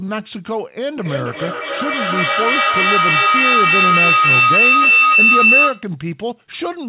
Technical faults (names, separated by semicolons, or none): feedback howl